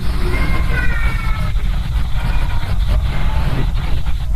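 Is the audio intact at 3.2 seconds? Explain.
No: repeated frames at 3.18–3.23 s replay a 46.4 ms block (likely two compressed frames) once more, a stutter, unlike echo's fading copies, lengthening the audio.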